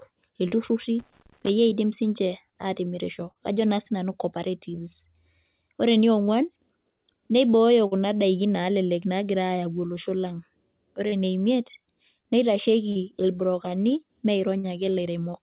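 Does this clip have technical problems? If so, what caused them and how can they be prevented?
Yes. Brief smears or wobbles at 0.48, 3.31, 7.87, 11.07, 12.92 and 14.59 s are short concealed packet loss. About 40 ms of audio arrived too late each time, and the receiver filled the gap by extending the preceding sound. A steadier network connection or a larger jitter buffer prevents this.

Irregular scratchy crackle from 0.99 to 1.49 s, ending just before "iidim siinche", is loose connector crackle. An intermittent contact rapidly broke and remade the signal path. Cleaning, reseating or replacing the cable and connector prevents it.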